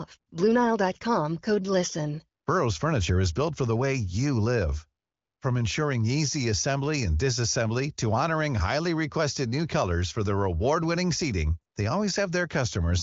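No technical faults can be heard in this audio.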